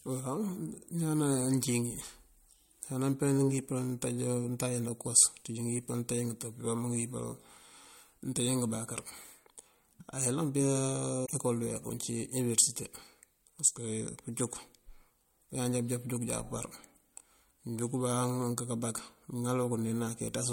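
At 11.22 to 11.30 s, just before "ecol dëweek", damaged data in a compressed stream makes the decoder lose frame sync, producing a brief glitch.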